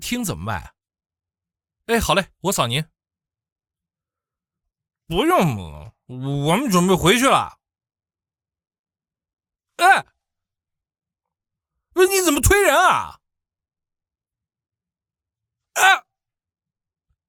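Nothing here sounds wrong at any point, so there's no fault to describe.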